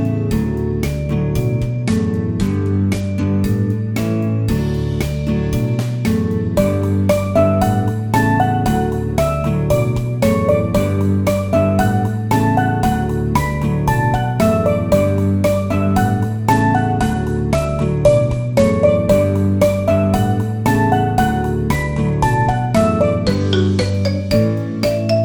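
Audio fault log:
1.72–3.27 s, 16.52–18.97 s, 21.75–23.94 s: Bluetooth SBC bit pool drop. Treble dulls and gritty noise rises. This fits the bit pool falling from 31 to 14, near 99 kbps, starving upper sub-bands.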